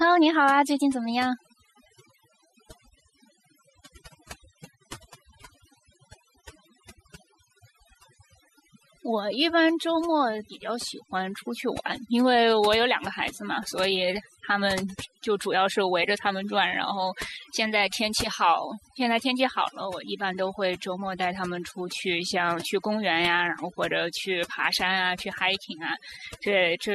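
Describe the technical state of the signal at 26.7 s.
At 26.7 s the speech still carries the overdone noise removal heard across the whole clip. The reduction is set so hard that bands near the noise floor are cut, leaving a lowered background that breaks up into twinkling specks.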